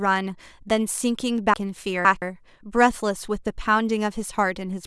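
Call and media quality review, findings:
Chunks out of order, 1.54–2.22 s. Speech jumbles briefly, with three hard joins. One 170.67 ms chunk plays three chunks late, after the ones that should follow it. Nothing lost, order wrong. Probable component: jitter buffer or write queue.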